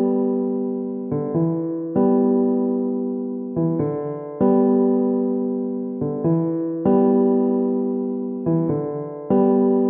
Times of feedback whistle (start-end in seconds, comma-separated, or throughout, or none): none